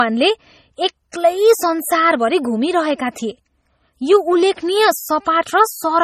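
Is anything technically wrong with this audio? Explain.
Yes. Throughout the speech there is nothing above 15 kHz, and the coding artefacts of a heavily compressed MP3 persist. This is likely low-bitrate audio saved at a high bitrate: the damage fits a roughly 32 kbit/s MP3 later re-encoded around 256 kbit/s, which cannot restore what was discarded.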